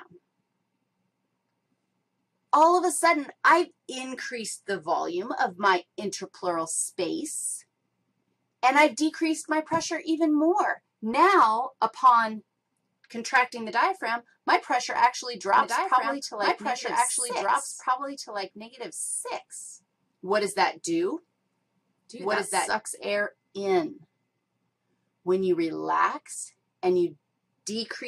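A second, slower capture path or an edit holding two out-of-step copies has likely mixed the audio in twice from 15.58 to 22.68 s, a doubled audio track. A dry, full-band copy trails about two seconds behind, roughly 5 dB quieter, starting and stopping abruptly.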